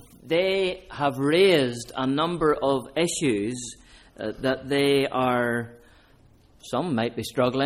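No technical faults are audible anywhere in this audio.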